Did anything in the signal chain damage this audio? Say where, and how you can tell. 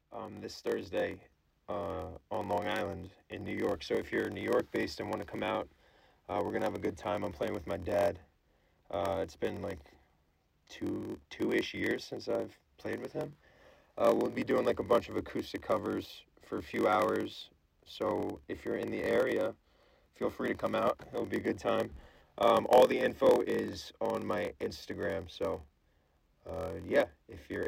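Yes, a block size mismatch (padded) at the buffer stage throughout: a 43.1 Hz buzz, fitting a 1024-sample read block, with regular zero-filled gaps in the waveform, vertical spectrogram stripes, and playback slowed to 0.938×.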